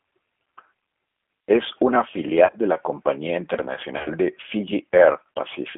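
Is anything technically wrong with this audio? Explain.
Yes. The whole clip is carried by the G.729 codec, which explains the plainly audible damage: the speech is narrowed to a phone line band of about 250 Hz to 3.4 kHz and sounds rough and slightly synthetic, because each 10 ms frame is rebuilt at 8 kbit/s from a vocal tract filter, a pitch predictor and a few pulses. Unlike simple band-limiting, the texture itself is coarse, not just muffled.

VoIP packet loss concealed by the speech codec occurs from 2.45 to 2.57 s, just before "de la compañía", and again from 3.98 to 4.12 s. In each span, roughly 60 to 70 ms of audio went missing in gaps scattered over 80 ms, which fits six or seven lost 10 ms frames, with the longest run lasting 30 to 40 ms. The decoder filled each gap by extending its last pitch and filter while fading the gain, so the speech smears into a buzzy tone or coloured noise that fades, instead of cutting to silence or clicking. 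It stays weak for a moment afterwards, since every new frame builds on the damaged one before it.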